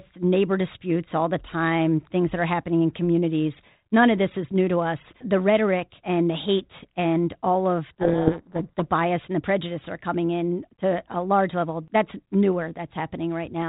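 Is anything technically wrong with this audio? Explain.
Yes. A codec payload misread occurs from 7.9 to 8.85 s, between "the hate and all" and "bias and the prejudice". The decoder reads each G.726 code word with its bits in reversed order, so valid-looking values land wrong and the speech disappears under harsh, grinding distortion until correct decoding resumes. The surrounding telephone-band sound fits 32 kbit/s G.726, with only light coding roughness.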